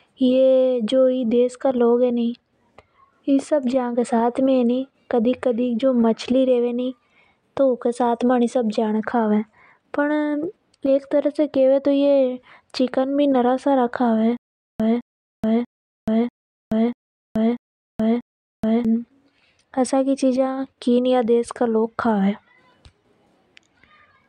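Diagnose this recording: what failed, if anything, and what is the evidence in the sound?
From 14.37 to 18.85 s the speech stutters with silent gaps: a 211 ms burst repeats seven times, separated by 428 ms of dead digital silence, a steady 640 ms cycle. This is likely a playback or stream stall, replaying the last fragment at each retry while the missing audio is lost.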